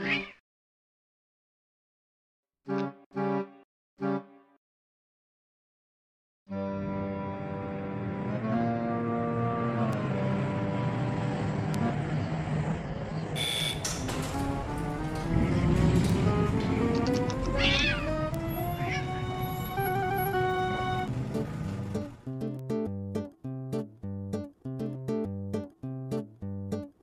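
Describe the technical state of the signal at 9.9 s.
At 9.93 s there is a bit error spike: two consecutive samples jump by a power of two, peaking at about -20 dBFS, and snap straight back. It is heard as one sharp tick. On a waveform it is a lone vertical needle, and on a spectrogram a thin full-band vertical line.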